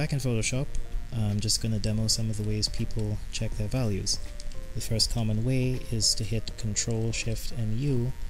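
Mains buzz runs throughout: switching spikes from 60 Hz power leak in as a raspy hum sitting well below the sound, drawn as evenly spaced horizontal harmonic lines on a spectrogram.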